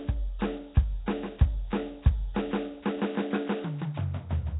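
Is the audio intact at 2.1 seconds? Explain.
No. At 2.1 seconds, as throughout the clip, the music sounds rough and hissy with a smeared, underwater blur and nothing above 3.9 kHz. This is likely Nellymoser compression at a low rate near 16 kbps, where weak bands receive no bits and are filled with noise.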